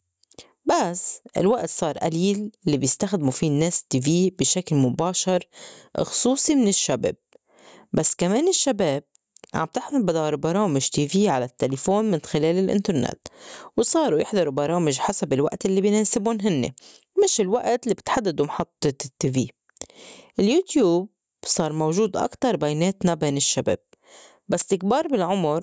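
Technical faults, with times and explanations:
throughout, gain pumping: gain likely set far too high, so a fast limiter clamps every loud sound; the gain swings around 15 dB, squashing the speech.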